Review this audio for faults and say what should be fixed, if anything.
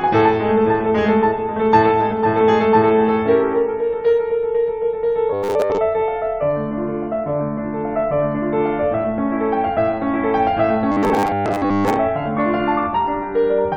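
The playback side is likely running short of fresh audio, so it keeps replaying its last 10 ms buffer while the real material is skipped. This produces robotic sound from repeated short buffers at 5.33 to 5.79 s and again at 10.92 to 11.97 s. With most of the music in those spans replaced by copies, the 10 ms repeat imposes a fixed 100 Hz buzz, turning the music into a hard, metallic drone. Larger or better-fed buffers would prevent it.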